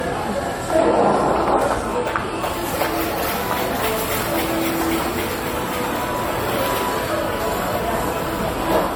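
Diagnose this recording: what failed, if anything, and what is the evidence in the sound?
Generation loss at the codec stage runs through the whole clip: a swirly, hollow smear with blurred attacks, worse than one pass at about 64 kbit/s AAC-LC would give. That excess points to a single encode being ruled out, and likely to roughly three AAC re-encodes compounding quantisation noise on shifting frame grids.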